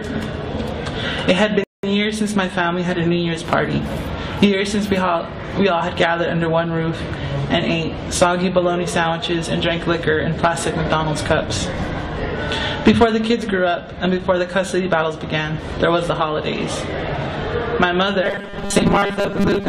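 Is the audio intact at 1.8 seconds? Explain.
No, 1.8 seconds falls inside a rebuffering stall running from about 1.64 to 1.83 s. The player drained its downloaded audio and had to sit and wait for more data, so the sound just drops to silence for roughly 0.2 s (195 ms added). When the data catches up, playback picks up exactly where it left off, so nothing is skipped or lost. It's a pure pause inserted into the timeline.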